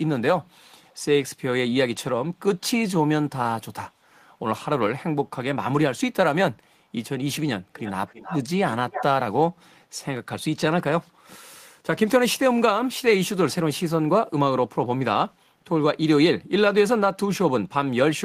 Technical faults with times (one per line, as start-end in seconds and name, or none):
0.90-0.95 echo leak
7.75-8.40 echo leak
8.74-9.04 echo leak